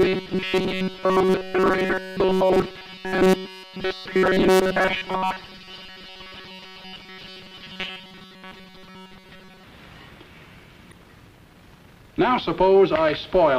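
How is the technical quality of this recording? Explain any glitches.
The quality is poor, with two kinds of fault.

Robotic sound from repeated short buffers runs from 0.01 to 9.63 s. A rigid, metallic buzz near 188 Hz runs through most of that stretch, likely from audio fragments of about 5.3 ms being repeated while new data arrived too slowly.

Damaged data in a compressed stream is heard at 6.96 s and from 10.90 to 10.93 s. Each is a brief blip, as the decoder loses sync on corrupted frames and searches for the next frame header.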